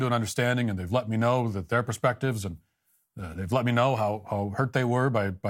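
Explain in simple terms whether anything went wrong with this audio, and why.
Nothing went wrong here.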